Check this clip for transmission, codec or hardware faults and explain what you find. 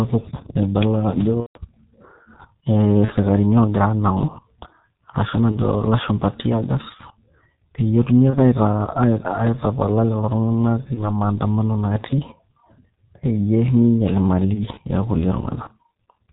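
Two faults are present: heavy G.723.1 codec damage throughout, and six bursts of VoIP packet loss concealed by the speech codec.

The G.723.1 codec runs at about 6.3 kbit/s across the whole speech clip. It discards everything above 4 kHz. Its voice model updates slowly, in 30 ms frames. Speech sounds muffled and hoarse. Consonants smear.

VoIP packet loss concealment appears at 1.40–1.59 s, 3.05–3.14 s, 5.52–5.60 s before "ilashumpa teargas", 8.30–8.38 s after "peyie etumi", 10.94–11.10 s, and 14.54–14.66 s after "peyie minyial". The decoder repeats its last pitch and filter with falling gain. Each gap turns into a fading buzzy tone or coloured noise, muted from the third lost frame in a row. The first is longest, about 150 ms, which fits five lost frames. Speech stays weak briefly afterwards.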